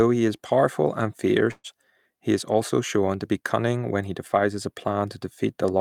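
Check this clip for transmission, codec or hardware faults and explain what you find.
One transmission fault stands out: a burst of packet loss from 1.51 to 1.67 s. Several consecutive packets never arrived in time, so the receiver concealed the hole by extending the last sound for about 125 ms while fading it down, then gave about 30 ms of silence. It sounds like a brief held sound dying away, followed by speech resuming with roughly 120 ms skipped. On a spectrogram, frozen, smeared bands taper off into a short blank strip, then normal structure restarts abruptly; the waveform shows a shrinking envelope, a flat gap, then a sudden onset.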